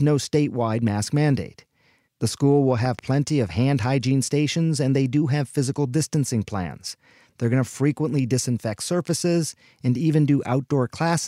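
A speech recording where a sudden voltage spike, likely from a plug, switch or static discharge, produces a loud pop, two sharp thumps well above the speech level between 2.86 and 3.01 s.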